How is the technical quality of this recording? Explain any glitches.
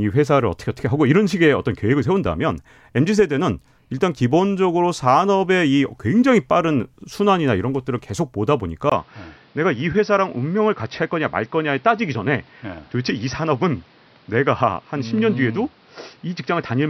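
There's one clear glitch in this speech recording. At 8.90 s the sound turns duller and boxier and stays that way to the end, after a 20 ms gap at the switch. That points to an input switched to a poorer device, likely another microphone or a headset call profile taking over. The new path cuts everything above 5.8 kHz, so the top end goes missing. It also adds a new, quiet background noise well below the speech, while the loudness stays roughly the same.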